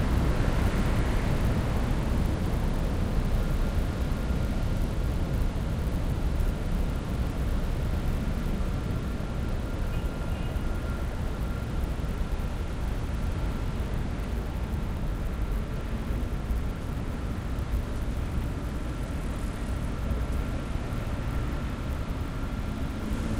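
A resampler restarted on every block runs through this whole recording of everyday sounds, leaving a 100 Hz buzz whenever sound is present. Each 10 ms block was converted alone, consistent with a 24 kHz to 48 kHz step, so every block edge lacked its true neighbouring samples and carries a small error.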